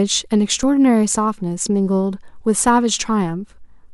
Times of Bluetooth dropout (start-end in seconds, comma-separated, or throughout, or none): none